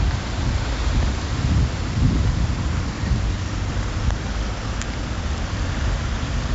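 From start to finish, each sample is stored as a coarse 4-bit step from a prediction: 4-bit ADPCM compression, fitting a rate of 64 kbps. Heavy gritty hiss rides on every loud moment, attacks turn rough, and nothing reaches above 7.7 kHz, dulling the top.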